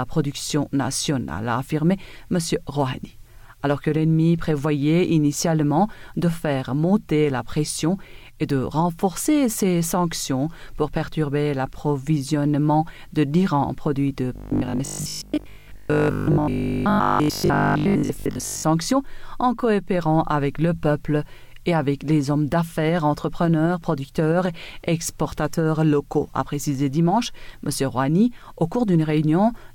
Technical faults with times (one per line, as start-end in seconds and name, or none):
14.36-18.64 robotic sound from repeated short buffers